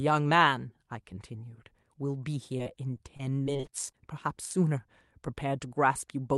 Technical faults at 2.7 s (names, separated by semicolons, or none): repeated packet loss (robotic sound)